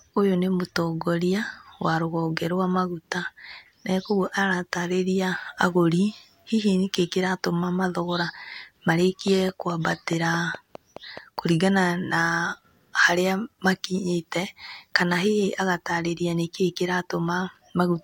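Interference from nearby equipment or a faulty connection or power supply is the likely cause of a train of clicks in this speech recording, running from 9.28 to 11.39 s and ending just before "kũringana na". The pulses arrive at a regular 4.75 per second, about ten in all, each sharing much the same shape and peaking around 5 dB above the speech. They come through as steady ticking laid over the talker and the gaps alike.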